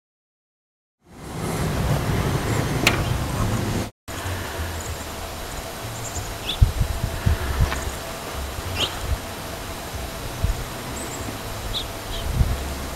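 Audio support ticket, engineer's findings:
No faults found; smooth fade-in ends at 1.86 s.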